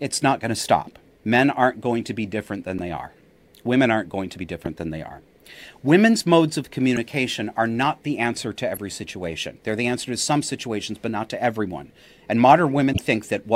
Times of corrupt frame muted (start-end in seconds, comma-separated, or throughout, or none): 2.78, 12.92-12.99